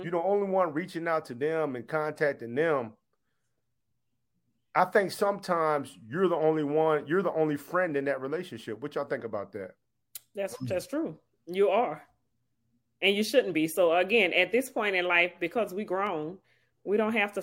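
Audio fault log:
16.07 s, block of digital silence: right near the end of the speech there's a tiny hole, only about 0.73 ms long, where the samples drop out and then jump back with no fade either way. A gap that short is heard as a tick or dip rather than a dropout, because the two hard edges sit almost on top of each other. Its length fits a 32-sample block, most likely a buffer that wasn't filled in time.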